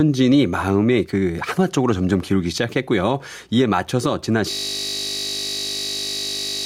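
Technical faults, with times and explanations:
Throughout: gain pumping. The level swings by around 5 dB as the gain is pulled down on loud sounds and let back up. Loud and quiet syllables sit closer together than they should, and the speech sounds squashed and flat. The likely cause is input gain set far too high, with a fast limiter or compressor clamping down on every peak and then releasing in the gaps.
4.51 s to the end: system hang loop. The audio stops moving forward and one 20 ms slice repeats exactly, over and over, for the last 2.1 s. Because the slice is so short, the repeats merge into a steady buzz at 50 Hz rather than a stutter. This happens when the computer or driver freezes but the sound hardware keeps cycling through the same small ring buffer. The repeating length fits a buffer of about 20 ms.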